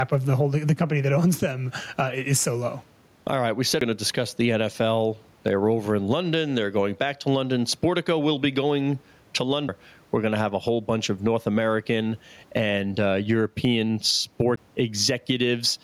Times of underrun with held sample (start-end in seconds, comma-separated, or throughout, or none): none